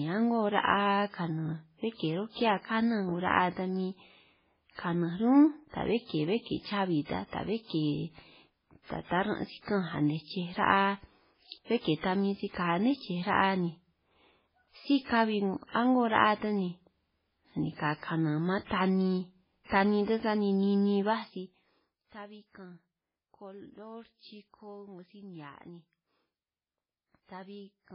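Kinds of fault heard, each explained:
MP3 compression: Heavy watery or swirly coloration runs through the whole speech clip, with nothing above 5.3 kHz. This is likely MP3 coding at a very low bitrate, which fits about 16 kbps. Weak frequency lines drop out between frames and the treble is cut off.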